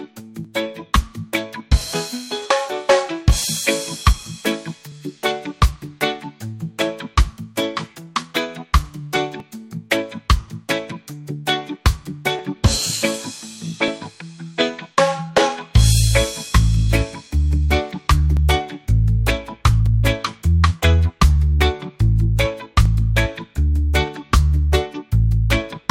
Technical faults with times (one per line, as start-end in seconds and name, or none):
0.45-25.84 clock drift buffer slips